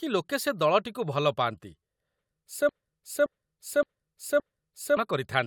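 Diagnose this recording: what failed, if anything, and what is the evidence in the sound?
A broken-record loop points to a stall at the buffer or playback stage: the stream most likely stopped delivering new audio while the player kept re-sending the last fragment it held. From 2.69 s to 4.97 s, the same piece of speech, about 0.57 s long, repeats exactly and back to back four times. The speech that should have filled those two-plus seconds is lost, replaced by the identical loop.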